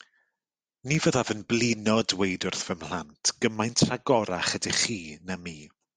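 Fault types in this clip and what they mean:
Dropped samples: Two sharp single clicks, at 0.95 and 2.55 s. Each is likely a fraction of a millisecond missing, making the waveform jump.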